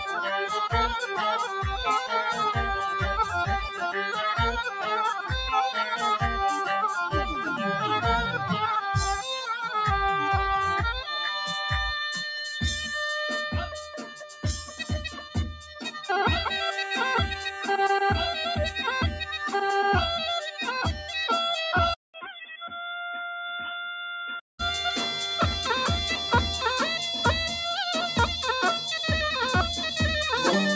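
Throughout, a noise suppressor applied to music or sounds is treating sustained material as noise. Its gain swings by roughly 10 dB, so held parts and decays sink while onsets pass, giving a pumping, thinned texture.

Sound cut by the noise suppressor shows up as distinct dips from 0.0 to 9.69 s (down about 10 dB), 13.64 to 17.64 s (about 16 dB, the deepest), 19.11 to 19.48 s, 20.44 to 21.1 s and 22.14 to 22.65 s (each about 11 dB). Steady tones drop away and tails end early.

From 21.94 to 24.59 s the character changes abruptly, likely from the input switched to a poorer device. A 200 ms gap marks the switch. The band then narrows from the usual 8 kHz, level falls about 10 dB, and a new noise floor appears roughly 55 dB down, sounding dull and boxy.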